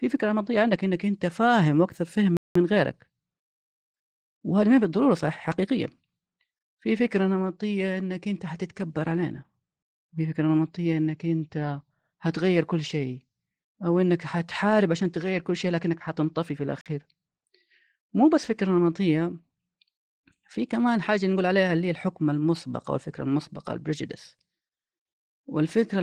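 Throughout, the speech carries Opus voice compression: hoarse, slightly robotic and muffled. The rough excitation coding, rather than a simple band limit, points to a low bitrate near 16 kbps.

At 2.37 to 2.55 s and again at 16.81 s (about 47 ms), a block of digital silence cuts the audio out. The total silence shows that no fade or concealment was applied, consistent with buffers of 8192 and 2048 samples.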